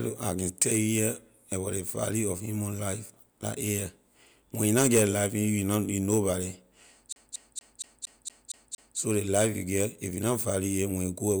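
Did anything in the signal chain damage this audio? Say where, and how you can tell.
Yes. The damage happened at playback, from a disc source. From 7.13 s to 8.98 s the speech stops moving forward. One slice, about 232 ms long, repeats eight times in a fast, even stutter. There is a brief mute at each jump back. This is a CD stuck on one turn. A scratch knocks the laser back one track at the same point on every rotation. It keeps rereading that same short stretch.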